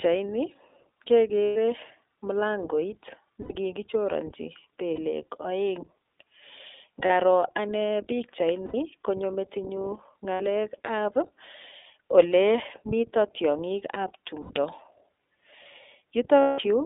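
A speech clip carried through the iLBC codec, with a narrow, rough sound. The band runs only from about 300 Hz to 3.7 kHz, so there is no air or sibilant brightness. iLBC codes each short frame on its own, and here the texture points to 20 ms frames at about 15.2 kbps. The coding damage is plainly audible as a synthetic, grainy edge on the voice. There are also lost iLBC frames, eight gaps in all. They fall at 1.44 s (120 ms), 3.42 s (80 ms), 4.94 s (40 ms), 7.06 s (40 ms), 8.66 s (80 ms, just before "konyo metinyu"), 10.34 s (60 ms, just after "konyo metinyu"), 14.42 s (80 ms, after "ole mito tiong'ikab") and 16.40 s (180 ms). In each gap the decoder repeats the last pitch cycle mixed with noise. This gives a held, buzzy vowel that fades over the longer gaps. The voice recovers almost at once because each frame stands alone.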